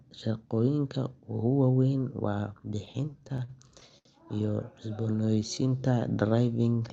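From 2.85 s to 4.07 s the speech catches and drags in a run of repeated stalls (stutter): eleven brief hitches, the longest about 71 ms, where the last sound is held and, in the longer ones, faded before the speech picks up again. Packets arrived late or slower than they were played, so the jitter buffer kept running dry. About 198 ms of stretched sound fills 16% of that stretch, with nothing actually lost.

Between 5.12 s and 6.24 s the speech turns slow and drawn out, playing at 88% speed while the pitch stays put. This is a jitter buffer slow-down. Running short of reserve, the receiver repeated single pitch periods and slivers of pauses to rebuild its cushion, adding 144 ms over that span. Throughout, the call codec limits the audio to 8 kHz, leaving the top end dull.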